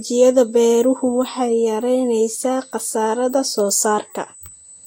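A USB whine runs through the whole speech clip. It is a fixed high tone at 8 kHz, strongest at its 16 kHz harmonic, sitting roughly 20 dB below the speech. The USB bus draws current in 125 microsecond microframes, and that current leaks in through power or ground.

The top end stops sharply at 17 kHz for the whole clip. Swirly, smeared artefacts of two different kinds are heard at once. The likely cause is transcoding between lossy codecs. This fits low-rate Vorbis followed by HE-AAC, with each pass adding its own damage.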